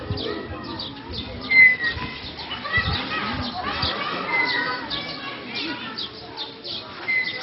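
From start to finish the sound is dull and boxed-in, with nothing above about 5.6 kHz, and a gurgling, granular grit clings to everything that remains. Upper bands seem to drop in and out, so the top edge flickers rather than holding steady. This is likely heavy MP2 compression at a very low bitrate, around 32 kbps. Starved of bits, the coder shuts off its higher sub-bands and quantises the rest coarsely.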